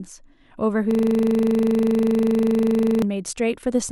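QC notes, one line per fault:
0.91–3.02 s, system hang loop: the speech abruptly gives way to one 40 ms slice of audio repeated back to back, roughly fifty times, for just over two seconds. At a 25 Hz repeat rate the result sits between a buzz and a stutter, a hard, rapid rattle with a fixed pitch-like periodicity. This is the signature of a frozen host or driver while the audio hardware keeps replaying the same ring buffer, which fits a buffer of about 40 ms.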